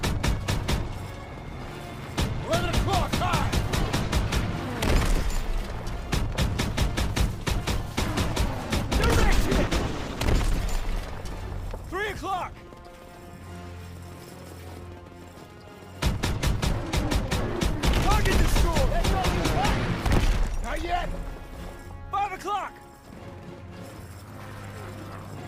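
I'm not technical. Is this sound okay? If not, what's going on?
No, there's one rough patch. From about 9.14 to 10.67 seconds there's a call bitrate drop: the connection squeezed the audio into far less data for roughly a second and a half, so it turns coarse, watery and dull before clearing up again.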